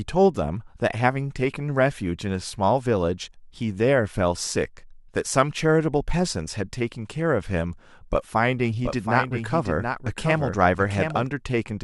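Doubled audio track, 8.75 to 11.27 s: a dry copy about 5 dB down lags roughly 0.7 s, likely captured again by a slower path.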